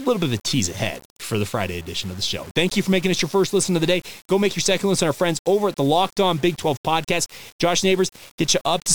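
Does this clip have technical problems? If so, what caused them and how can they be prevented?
Yes. Throughout the speech there is grainy distortion that tracks the voice, with quiet passages turning gritty or sputtering. This is likely low bit depth without dither: rounding to 6 bits leaves error only about 25 dB below the signal. Prevent it by keeping 16 bits or more, and dithering when reducing.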